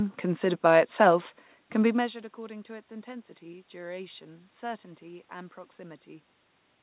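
No technical faults are audible.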